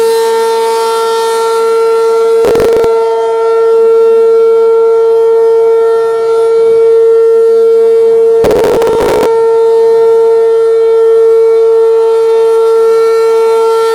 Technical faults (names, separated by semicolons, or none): processor overload crackle